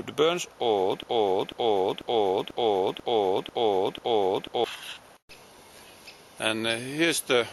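From 1.03 s to 4.64 s the audio falls into a broken-record loop: one fragment about 0.49 s long plays seven times back to back, each pass identical, and the sound that belonged to those seconds never arrives. The likely cause is a player, encoder or stream that stalled and kept resending its last buffered piece. Unlike an echo or reverb tail, the repeats neither decay nor overlap; they restart cleanly at full level.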